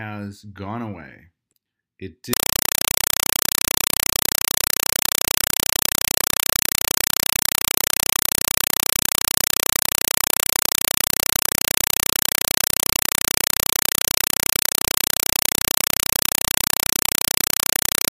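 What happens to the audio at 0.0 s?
Nothing goes wrong at 0.0 s; the audio is intact at that moment.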